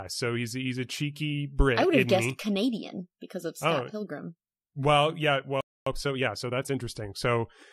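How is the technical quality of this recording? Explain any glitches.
The speech has two connected glitches near the end, a playback stall followed immediately by time-compressed catch-up.

From 5.61 to 5.86 s the speech cuts out mid-flow for 257 ms. This is a playback stall, likely caused by the player running short of data or its thread being blocked. The waveform shows a flat gap, and the spectrogram shows a blank vertical band across all frequencies.

From 5.86 to 6.89 s comes time-compressed catch-up. The player works off its backlog by removing small pieces and cross-fading across the joins, so the speech runs at 1.25 times normal speed without any change in pitch. On a spectrogram, the syllables and harmonic bands look squeezed closer together in time.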